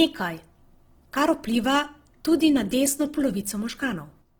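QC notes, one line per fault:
Throughout, Opus compression, likely at a low bitrate near 16 kbps. Bands stay filled up to about 20.4 kHz, but the speech sounds grainy, rough and noisy.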